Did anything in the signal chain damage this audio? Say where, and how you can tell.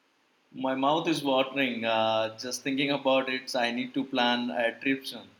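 No, nothing in the signal chain has damaged this speech recording. No stage between capture and playback leaves a mark that can be heard.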